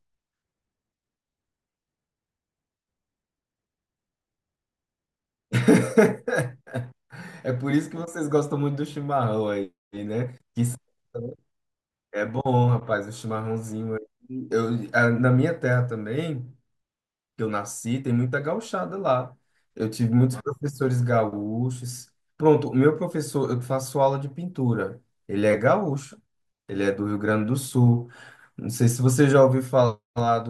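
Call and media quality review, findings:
No audible faults found in this speech recording.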